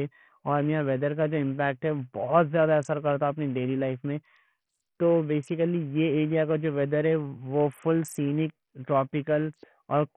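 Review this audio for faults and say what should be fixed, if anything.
The whole clip, from start to finish, carries heavy coding damage with the signature of Bluetooth SBC compression, likely from a link running at a very starved bitrate, on the order of 48 kbps. The upper sub-bands get almost no bits, so the treble of the speech flickers in and out while a gritty, aliased roughness sits on what remains. That flickering grit sets it apart from a plain low-pass, which would dull the top cleanly. To prevent it, record over a wired connection or force a higher-quality Bluetooth codec or bit pool.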